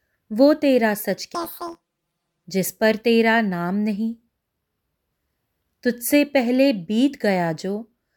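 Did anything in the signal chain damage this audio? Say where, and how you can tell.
Yes: planar audio read as interleaved during sample-format conversion, 1.35–2.44 s. The 11.6 ms blocks give a robotic 86 Hz buzz, visible as evenly spaced waveform breaks and vertical spectrogram striping.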